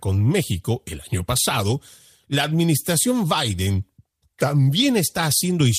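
No technical faults can be heard in this speech recording. At no point does anything in the sound call for comment.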